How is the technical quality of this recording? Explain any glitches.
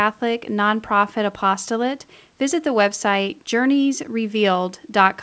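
No glitches or faults heard.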